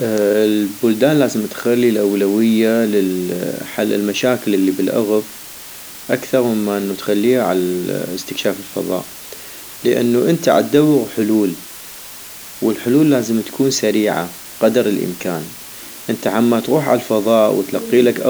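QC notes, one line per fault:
Throughout, low bit depth with dither: a constant, even hiss sits under the speech at roughly 20 dB below the signal, with no distortion or grit. The audio is held to 6 bits, and dither added before rounding turns the coarse quantisation error into steady white noise.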